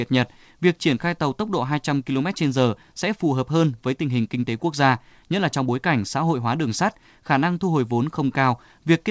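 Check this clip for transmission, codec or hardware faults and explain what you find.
No transmission, codec or hardware faults turn up in this speech. It has passed through a call path that is working as intended, with nothing above 8 kHz, a band limit that fits a wideband codec such as G.722.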